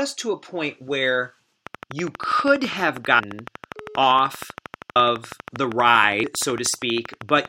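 Speech clip with two faults. Right after "to a point where", a train of clicks starts at 1.67 s and runs to 7.46 s. It is a regular ticking at 12.5 clicks per second, roughly 70 in all, peaking about 10 dB above the speech. The even spacing and similar shape point to one repeating source, likely electrical interference from nearby equipment or a faulty connection or power supply. There are also three compressed-frame skips, where whole frames were never decoded and the audio jumps forward. At 3.18 to 3.20 s about 200 ms of material is lost. At 4.95 s about 150 ms is lost, and at 6.23 s about 100 ms. The codec uses 23.2 ms frames, and roughly ten, seven and four frames were dropped, either missing from the file or rejected as damaged.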